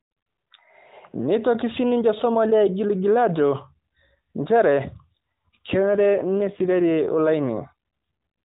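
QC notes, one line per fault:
5.81–7.33 s, AMR rate drop: the mobile codec falls back to a lower mode, which sounds like a step from 12.2 to 5.9 kbps. The speech turns rougher and more synthetic with no gap and no change in bandwidth, because fewer bits go to the pulse excitation. Quality returns once the higher rate resumes.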